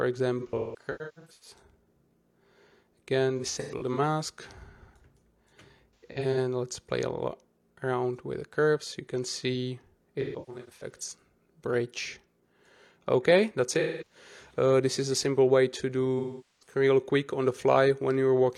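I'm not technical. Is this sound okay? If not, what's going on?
No. There is AAC frame loss with concealment at 0.40–1.58, 3.38–4.00, 5.96–6.37, 10.21–11.00, 13.79–14.15 and 16.18–16.75 s. Chunks of sound went missing and the player guessed them from the sound just before. Instead of silent gaps or clicks, you hear smeared, hissy, swirly patches.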